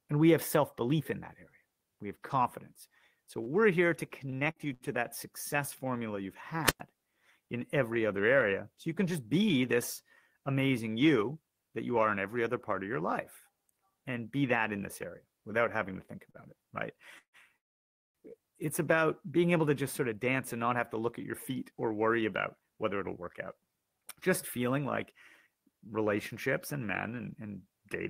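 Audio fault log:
3.43–4.83 s, repeated packet loss (robotic sound): four short holes, the longest 65 ms, are each patched by repeating the last sound, giving a choppy texture with pieces missing, about 60 ms actually missing. Unlike a single stall, the patches recur in quick succession.
6.64–6.80 s, wireless microphone squelch dropout: a brief rise of hiss gives way to about 109 ms of near silence as the receiver's squelch mutes the fading radio signal, then sound returns. The hiss before the hole separates it from a network gap.
7.40–7.91 s, jitter buffer speed-up: short pitch-period pieces totalling around 50 ms are cut out, so this half-second runs at 109% speed with pitch unchanged. It sounds briefly hurried rather than broken, with no holes or buzz.
16.31 s, short stall from a late packet: between "to think" and "it right" the last sound is held for 36 ms while the buffer waits, then continues from the same place. 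Nothing is lost; only a slight held sound is heard.
17.18–17.37 s and 17.58–18.18 s, call audio freeze: after "it right" the sound is stretched into a fading continuation and then falls silent, for about 80 ms in the first gap and 550 ms in the second. Sound then resumes where it stopped, adding 156 ms and 567 ms of delay. Held-up packets are the likely cause. These gaps are much longer than the stall and end in true silence.
19.62–26.78 s, jitter buffer speed-up: over about seven seconds, leading up to "men and", roughly half a second of pitch-period slices is removed. Delivery runs at 107% speed with unchanged pitch, so it sounds steadily rushed rather than choppy.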